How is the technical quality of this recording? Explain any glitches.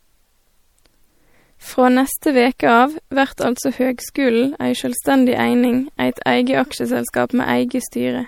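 The technical quality is compromised by plainly audible compression damage across the whole recording. MP3 compression is the likely cause. The speech sounds watery and swirly. Sibilants chirp metallically, and consonant attacks smear. The encoder was short of bits, consistent with about 64 kbps. It dropped weak frequency lines, which flicker on and off between frames. Nothing is present above 20.8 kHz.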